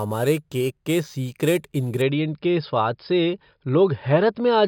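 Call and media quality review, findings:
Imaging from sample-and-hold upsampling, 0.00 to 2.02 s. Resampler raising an approximately 11 kHz source to 48 kHz by repeating samples with no interpolation or anti-imaging filter. Mirrored speech spectrum from about 5.5 kHz to 11 kHz, about 20 dB below the signal. Bright metallic fizz tracking speech level, lowest image moving against pitch. Clears after 2.02 s.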